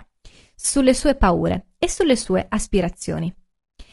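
Low-delay AAC compression runs through the whole speech clip, with plainly audible damage from start to finish. The voice sounds rough and grainy, with noise filling the gaps between harmonics, a sign that short coding frames are resolving pitch poorly. The likely cause is AAC-ELD, the low-delay codec of video calls, whose brief frames demand more bits. The degree of damage fits a bitrate of around 32 kbps.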